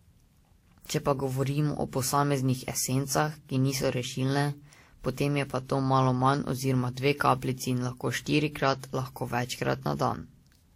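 From start to finish, the speech shows stacked coding damage. Nothing sounds above 16.7 kHz. The artefacts of two different codecs are heard together. This is likely transcoding between lossy codecs, which fits Vorbis at a low bitrate re-encoded to WMA.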